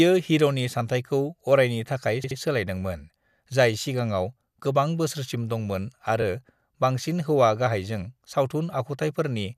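At 2.23 to 2.38 s, right after "हिर'नि सानथायखौ अरायनि थाखाय", repeated frames cause a stutter. A 72 ms block plays three times, which fits a run of three compressed frames being resent. This adds 144 ms. At 6.22 to 6.24 s, after "सिगांआव गोबां बोसोरसिम दंमोन", a 24 ms block repeats once, giving a brief hitch.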